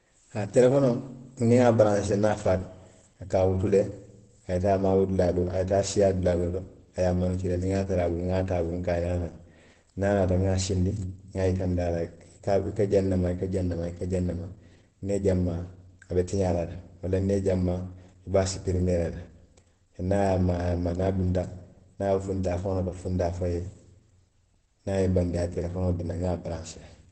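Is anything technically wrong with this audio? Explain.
Yes. Throughout the speech there is heavy codec damage, likely from Opus compression in its SILK speech mode at a very low rate, consistent with around 12 kbps. Wideband coding removes everything above 8.3 kHz, so the speech sounds muffled and hoarse.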